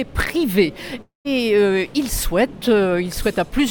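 From 1.01 to 1.27 s, a likely long network dropout loses 240 ms: a fading buzz, then silence, seen as a smeared band thinning to blank.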